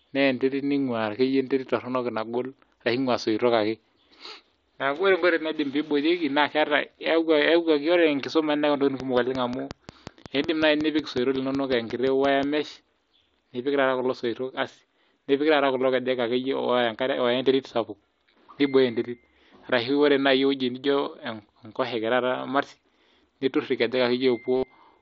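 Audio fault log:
9.00–12.44 s, train of clicks: a regular ticking at about 5.5 clicks per second, around twenty in all, each spike peaking roughly 10 dB above the speech and audible in the pauses as well. The likely cause is interference from nearby equipment or a faulty connection or power supply injecting near-identical pulses. On a waveform these show as evenly spaced needle spikes. On a spectrogram they appear as thin full-height vertical lines at steady spacing.
17.23 s, concealed Bluetooth headset packet loss: 7.5 ms of audio went missing, which fits a single dropped headset frame. The receiver patched it by repeating the best-matching piece of the preceding waveform, so it is almost inaudible. Any trace is a tiny seam in the waveform, with barely a smear on a spectrogram under the light mSBC graininess.
24.56–24.63 s, concealed Bluetooth headset packet loss: 67.5 ms went missing, spread across 75 ms, and the longest unbroken gap was 60 ms. 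Looping the same short stretch for that long turns into a buzzy held tone at full level, followed by a slight warble as the real speech resumes. On a spectrogram this appears as flat horizontal harmonic bars. On a waveform it shows as a visibly repeating cycle.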